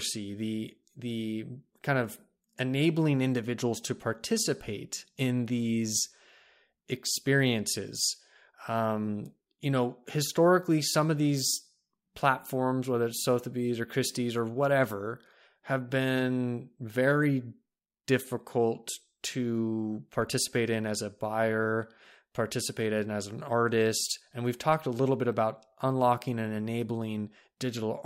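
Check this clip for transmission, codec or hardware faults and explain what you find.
No faults can be heard in this speech.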